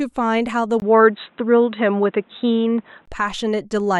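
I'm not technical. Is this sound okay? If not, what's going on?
No. Between 0.8 and 3.08 seconds the input likely switched to a poorer device, such as a second microphone or a headset in call mode. At 0.8 seconds there is a tiny gap of about 20 milliseconds, then the speech turns dull and boxy because nothing above about 3.9 kHz gets through. Its level also shifts a bit, and it picks up faint new background noise. At 3.08 seconds the fuller, clearer sound returns.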